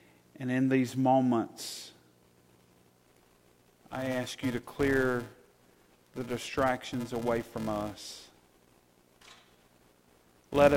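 From 2.96 s to the end of the clip, a buzz near 375 Hz rides on the sound, the signature of a filter restarted on every block. The filter discards its memory at each block boundary and starts from silence, so every block opens with a small transient. The tick rate fits a 128-sample block. Unlike mains hum, the buzz swells and fades with the signal's level, and unlike dropout clicks it never breaks rhythm.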